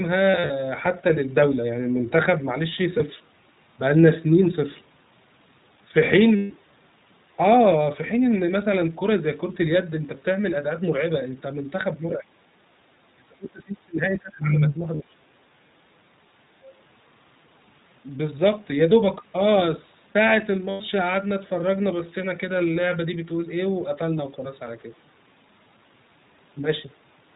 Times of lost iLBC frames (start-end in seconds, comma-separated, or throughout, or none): 0.30-0.52, 2.98-3.02, 6.36-6.52, 14.96-15.01, 20.70-20.82